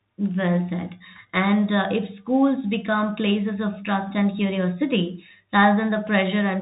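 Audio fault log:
Throughout: Bluetooth CVSD headset codec. Speech band stops near 3.8 kHz; the one-bit delta coding, fitting a 64 kbps stream, leaves scratchy sibilants and granular hiss.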